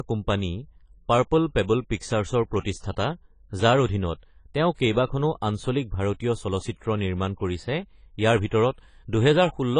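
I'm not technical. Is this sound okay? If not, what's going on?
No. AAC compression, throughout: the speech was likely squeezed hard to save space, leaving it dull, smeared and fizzy, with nothing above 10 kHz.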